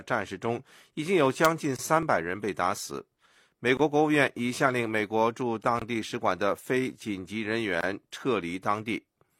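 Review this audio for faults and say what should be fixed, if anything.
There's a gap between chunks at 1.76, 3.77, 5.79 and 7.81 s: hard-edged 23 ms holes every 2 s. An overlap between stream segments at 2.03 and 6.02 s clips a few tens of milliseconds each time, as a tiny skip every 4 s. To prevent both, trim the codec padding and make segment timestamps line up exactly, with no gaps or overlap.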